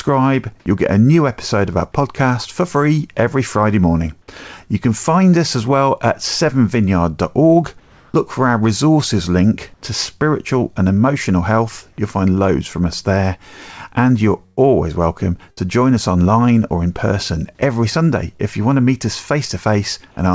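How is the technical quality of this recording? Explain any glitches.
The recording has three kinds of glitch from about 7.8 s onward, and none of it carries anything above 8 kHz, which fits a wideband call codec such as G.722.

Comfort noise in place of the background, from 7.80 to 8.14 s and from 9.74 to 9.82 s: the sender likely stopped transmitting during pauses, and the receiver filled them with synthetic noise. The quiet background, roughly 33 to 35 dB below the loud parts, turns flat and featureless, about 1 dB and about 4 dB quieter respectively.

Burst of packet loss, at 14.46 to 14.59 s and 15.51 to 15.59 s: runs of packets arrived too late or not at all, so the receiver stretched the last sound and faded it. About 120 ms and then 60 ms of audio are gone, heard as a held, fading smear before the sound jumps ahead.

Short concealed packet loss, at 18.37 to 18.41 s: about 20 ms never reached the decoder in time, and the gap was patched by continuing the preceding sound and then blending back into the real audio. 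It comes across as a brief smear or wobble.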